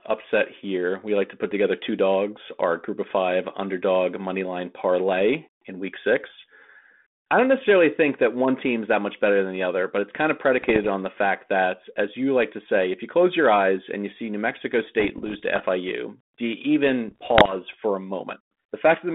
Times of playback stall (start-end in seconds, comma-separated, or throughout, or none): none